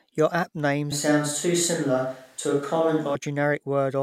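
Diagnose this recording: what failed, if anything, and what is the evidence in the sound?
The close microphone's feed likely dropped out at the capture stage, leaving a distant microphone to carry the speech. Right after "app name", from 0.92 to 3.15 s, the voice turns suddenly roomy and hollow and thinner in the bass, barely changes in level, and carries faint room noise some 35 dB below it.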